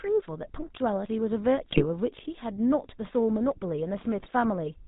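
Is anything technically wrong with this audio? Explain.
Yes. GSM full-rate codec coding runs through the whole speech clip. The codec models the vocal tract and drives it with a regular pulse train, keeping only a thinned excitation at a rate that fits 13 kbps, and it drops everything above 4 kHz. The result is a dull, band-limited sound with a plainly audible buzzy, gravelly roughness.

GSM bit errors strike from 1.70 to 1.86 s and from 4.18 to 4.32 s. Corrupted filter, pitch and gain values reach the decoder, so for a few frames the spectrum warps and the level jumps. The voice briefly breaks into squawks, pops and gargling.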